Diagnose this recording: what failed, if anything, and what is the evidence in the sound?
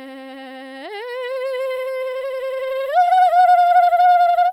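Nothing failed in this music recording, and there is no evidence in the sound of any fault at any stage.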